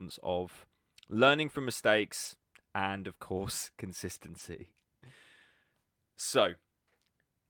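Brief rough, noisy patches at 2.25–2.35 s, just before "and of course", and at 4.39 s are lost packets rebuilt from error correction, filled from the next packet's low-bitrate copy instead of silence.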